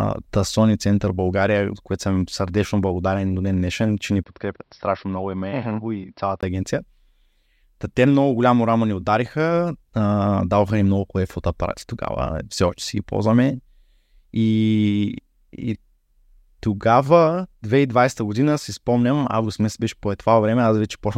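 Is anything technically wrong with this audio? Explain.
Yes. From 4.24 to 6.43 s, just after "ден днешен че ни", the speech turns dull, boxy and about 5 dB quieter, with nothing above 5.6 kHz, a new noise floor roughly 45 dB down, and a 20 ms gap at the change. The likely cause is an input switched to a poorer device.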